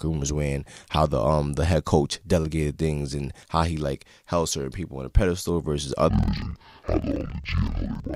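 From 6.10 s, after "on a pedestal versus", interleaved audio is read as planar. Speech drops an octave, doubled and choppy at 21.5 Hz, fitting 2048-sample blocks.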